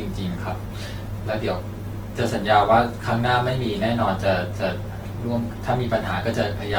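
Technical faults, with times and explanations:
Throughout: Opus compression. The speech sounds rough and grainy, with a noisy, sandpapery texture and a gritty haze in place of clean detail. The top end still reaches about 20.1 kHz, so the sound isn't dulled. The likely cause is Opus in its CELT music mode at a low rate, one that points to about 16 kbps. It keeps each band's energy but fills starved bands with folded or noise-like content, which produces the coarseness.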